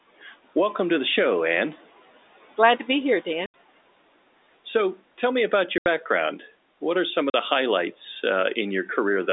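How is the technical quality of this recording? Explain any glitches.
The speech is cut by three short silent dropouts, each from packet loss filled with silence. The first comes at 3.46 to 3.54 s, right after "to be here"; the second at 5.78 to 5.86 s, after "tell me about"; and the third at 7.30 to 7.34 s, between "are some of" and "the highlights". The first two gaps last 80 ms and the third 40 ms, which fits the loss of consecutive 20 ms packets. The receiver had nothing to play for those moments and inserted pure silence, so the sound stops dead and restarts at hard edges. What separates this from concealed loss is that the gaps are genuinely empty, with no smeared or repeated sound bridging them. Even the narrow telephone band and the room noise drop out completely inside each hole.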